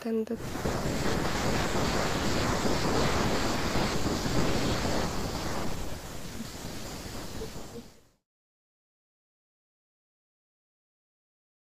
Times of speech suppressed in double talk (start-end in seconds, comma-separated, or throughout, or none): 0.62-0.91, 1.62-2.42, 2.70-3.60, 4.13-6.68, 7.35-8.84